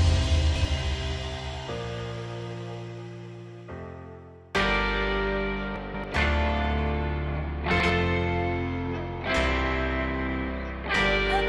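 Three times the chunks play out of order: a block of roughly 93 ms is written late. From 0.37 to 0.65 s and from 5.76 to 6.04 s it lands two chunks late, and from 7.71 to 7.90 s one late, giving brief jumbled stretches with hard joins.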